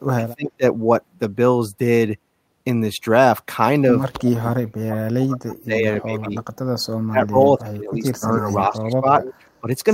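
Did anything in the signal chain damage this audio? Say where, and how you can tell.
Yes. The damage sits in call processing. The speech is pulled down at 0.14–0.64 s by about 25 dB, at 4.16–6.41 s and 6.85–9.06 s by up to about 40 dB, and briefly at 9.61–9.67 s by about 10 dB. This is speech suppressed in double talk. The likely cause is an echo canceller that treated the local talker as loudspeaker echo while the far end was also speaking, and attenuated both.

A second call-processing fault is echo leak. A faint delayed copy of the speech appears at 8.37–8.57 s, about 25 dB below the talker, and again at 9.21–9.33 s, stronger at about 15 dB down. Both arrive 306 ms after the original. That fixed lag points to a speakerphone path whose echo canceller likely left residual pickup unremoved, so it was returned down the line.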